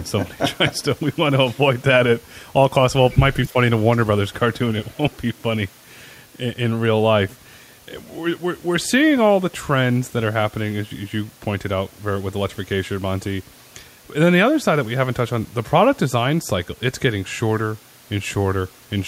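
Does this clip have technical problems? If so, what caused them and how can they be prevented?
Yes. Brief echo leak occurs at 3.1 to 3.18 s, 3.92 to 3.97 s and 4.85 to 4.97 s. Faint delayed copies of the speech return about 256 ms late, well below the main speech. A loudspeaker echo canceller likely let residual pickup through. Using a headset or better-tuned echo cancellation would prevent it.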